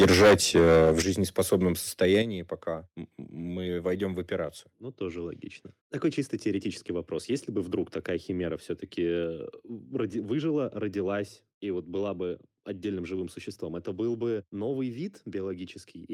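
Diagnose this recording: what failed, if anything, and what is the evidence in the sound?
Microphone overload at the converter, likely from excessive input gain: harsh crackling flat-topped peaks about 15 dB over at 0.0–1.02 s, milder ones at 1.39–1.56 and 2.01–2.17 s, not codec smearing.

Microphone volume stepped down in call processing, likely automatic gain control: voice and background fall together in single steps, about 9 dB at 1.02 s and 8 dB at 2.22 s, unlike a gradual fade.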